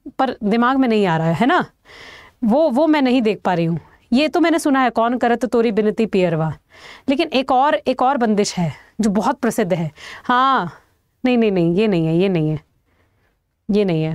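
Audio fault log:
No audible technical faults were identified anywhere in this recording.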